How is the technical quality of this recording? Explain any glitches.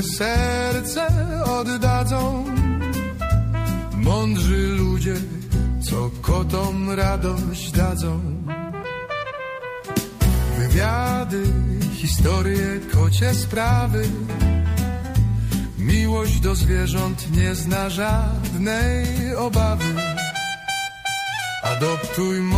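The recording has two glitches of the same kind, both compressed frames skipped, at 16.37 s and 18.46 s. At each point the decoder drops whole compressed frames, either because they are missing from the file or because they were rejected as damaged, and playback jumps ahead by about 20 ms.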